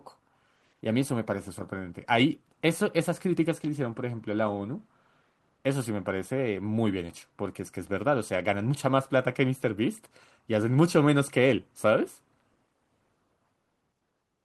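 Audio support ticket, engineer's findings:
No faults found in the speech recording. No symptom, component or mechanism to report.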